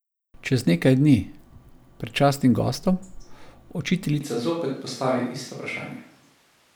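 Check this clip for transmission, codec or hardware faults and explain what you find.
One fault is present, a hardware or pickup problem rather than a codec one. From 4.21 s to the end, the speech turns suddenly roomy and hollow. This is a switch to a distant microphone. The close microphone's feed likely dropped out, leaving a farther one in use. Bass thins, the level falls by roughly 5 dB, and room noise rises to about 35 dB below the speech.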